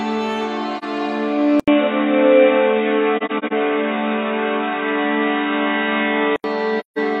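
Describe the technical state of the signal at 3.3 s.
At 3.3 s the music is dull and band-limited. From 1.60 s to 6.44 s nothing reaches above 3.8 kHz. That span opens with an 80 ms silence, and the level shifts by about 5 dB. A new noise floor sits roughly 40 dB under the music. The likely cause is an input switched to a poorer device.

AAC frame loss with muting also falls here, from 3.17 s to 3.53 s. Lost frames had their spectrum zeroed, so they drop out of the sound. About 171 ms is missing, scattered across 341 ms, which fits roughly four lost frames. The longest gap is about 40 ms. The overlapping windows fade each hole in and out, so the gaps are soft-edged.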